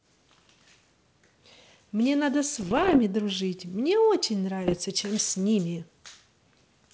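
From 2.56 to 2.99 s and again from 4.62 to 4.81 s, bit errors on an ADPCM link, at a rate under one percent, knock the G.722 decoder's step size and predictor off track, causing pops and rough bursts. The waveform shows spiky level jumps; the spectrogram shows broadband vertical streaks.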